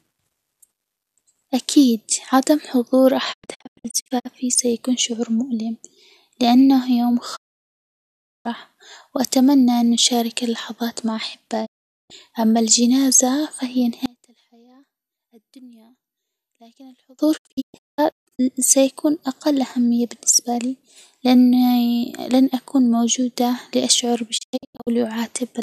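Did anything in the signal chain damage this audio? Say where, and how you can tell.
Yes. Digital broadcast dropout occurs five times: 3.32–4.27 s, 7.35–8.47 s, 11.65–12.12 s, 17.36–18.41 s and 24.37–24.89 s. Each time the speech fades to silence in about 20 ms and returns later, with the content in between gone. At 3.32 s, 17.36 s and 24.37 s the gaps are scattered short holes, the longest about 0.19 s. At 7.35 s the gap is a solid 1.08 s mute. This is a reception and decoding fault: corrupted frames failed their checks and the receiver muted. The hole lengths fit 24 ms frames.

Between 14.06 s and 17.19 s the speech collapses by about 29 dB to a faint residue and then recovers. That is the signature of one channel inverted when the stereo pair is summed to mono. The common centre content cancels and only the small difference between channels survives. The likely cause is reversed polarity on one leg, from analogue wiring or the playback stage.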